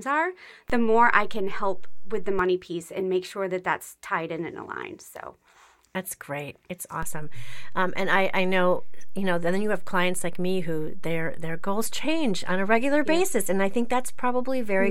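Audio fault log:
0.70–2.39 s and 7.03 s to the end, DC step: the waveform's zero line jumps by about −23 dBFS, drops back at 2.39 s, then jumps again by about −24 dBFS and holds. Each sudden offset shift lands as a low thump while the speech carries on untouched.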